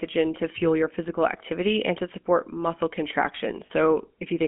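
A speech clip carrying plainly audible GSM full-rate codec damage throughout. The voice is buzzy and gravelly. The coder rebuilds the vocal tract from a sparse pulse excitation, and the band sits between about 150 Hz and 3.4 kHz. This fits the 13 kbps full-rate coder. From 3.66 to 3.71 s, lost GSM frames cause a short, rough metallic ring. The decoder repeated the last good frame's settings to fill the 40 ms gap, which fits two dropped frames.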